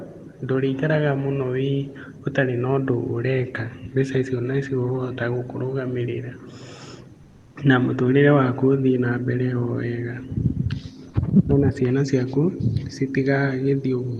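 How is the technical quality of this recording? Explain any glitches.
There's one glitch, a short stretch of comfort noise in place of the background. The call codec tops out at 12 kHz, with a thin coding texture that fits a low bitrate around 24 kbps, and a faint room noise sits about 41 dB under the speech.

From 7.23 to 7.55 s, roughly a third of a second, the real background drops out and a smooth, featureless hiss fills the gap, about 2 dB quieter than the room it replaces. It's likely discontinuous transmission: the sender's voice detector decided nothing was being said and stopped sending, so the receiver synthesised noise shaped like the background, which sits about 29 dB below the loud parts. You hear the room's texture flatten out briefly, then come back when the sound resumes.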